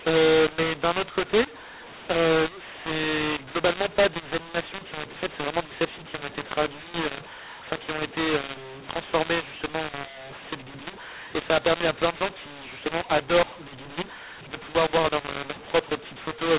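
From start to finish the speech carries a mu-law and A-law mix-up. The G.711 telephone coding was written as mu-law but read back as A-law, so every level is scrambled: some samples come out too loud, others too soft, and the quietest ones are lifted well above silence. The voice sounds harsh and distorted, and the pauses fill with hiss. Unlike clipping, which only flattens peaks, this noise sits in the gaps too. The 4 kHz telephone band of the coding itself can still be heard.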